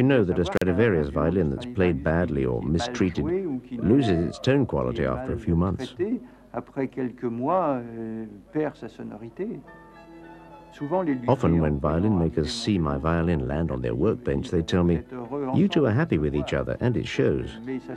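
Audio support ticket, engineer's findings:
Intermittent contact, 0.56–0.62 s: sound drops out for about 42 ms with crackle at both edges and faint hiss in the gap. Probable loose cable or plug briefly opening the line.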